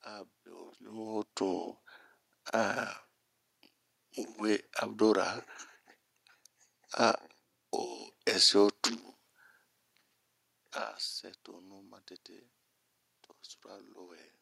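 No technical faults can be heard anywhere in the recording. The room's own background noise sits underneath throughout, and the talker's level shifts near the start and again around 10 seconds in, as when someone leans away from or toward the microphone.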